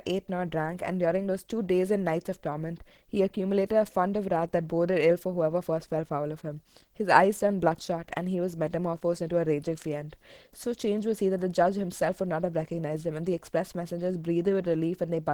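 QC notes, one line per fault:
Throughout, Opus compression: likely a hybrid-mode Opus encoder short of bits, consistent with about 16 kbps, so the speech sounds plainly hoarse and grainy despite full bandwidth.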